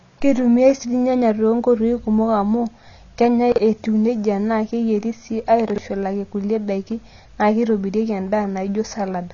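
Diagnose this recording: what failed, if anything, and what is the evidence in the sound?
The codec stage failed first. Across the whole speech clip the sound is dull and band-limited, with nothing above 7 kHz. The coding damage is plainly audible throughout. The cause is likely AAC compression, AAC-LC at a low bitrate, which fits about 24 kbps. At that rate the encoder lowers its cut-off and quantises the remaining frequency lines coarsely against its hearing model. The lost top octave and smeared detail come from that.

The second fault is chunks out of order. It happened in the network or in the writing path, since either could deliver a block late. From 3.52 to 3.58 s, between "kumok amu kenyae" and "etiu neija naa keyieri", the audio jumbles briefly. It happens again from 5.70 to 5.78 s, between "neija naa keyieri sii" and "kulie daiki naa keitobirieki". Each time a 20 ms chunk plays late, by two chunks and then by three. 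Nothing is missing. The order is wrong, with three hard joins each time.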